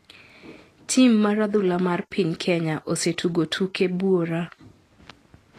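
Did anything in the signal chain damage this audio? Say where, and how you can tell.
Yes, at the codec stage, throughout the speech. The top end stops at 14.2 kHz, and the treble is grainy and hissy, with roughened tones and smeared consonant attacks. This is likely Vorbis compression, consistent with a low bitrate near 37 kbps. Unlike steady background hiss, the graininess follows the speech, because coarse quantisation turns fine detail into noise.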